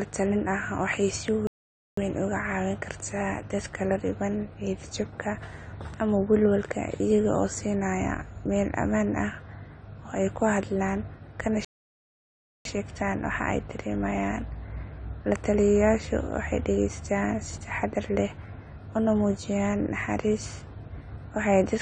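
AAC compression runs through the whole recording. The speech sounds dull and smeared, with a warbling, fizzy texture on sustained sounds and sibilants. It is likely from low-bitrate AAC-LC coding, which fits about 32 kbps, where the encoder lowers its cut-off and leaves holes in the spectrum.

A playback stall at 1.47 s cuts the audio to silence for 0.50 s, and it resumes on "weyn oga". A second, at 11.65 s just after "ey kuxadlaan kana", lasts 1.01 s. The player likely ran out of data and went quiet until it recovered.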